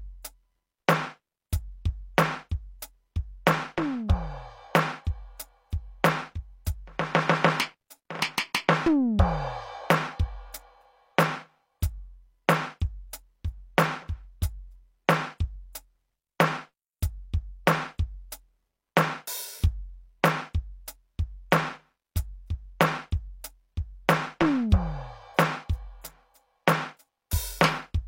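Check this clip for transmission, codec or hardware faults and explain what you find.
One codec fault is audible in this music clip. Pre-echo at 21.51 s: a sharp attack lands late in a transform block, and the codec spreads quantisation noise sized for that loud onset across the whole block, including the quiet instant before it. About 11 ms of hiss runs ahead of the hit, so the transient loses its crisp edge and sounds softened and smeared, as if it starts a fraction early.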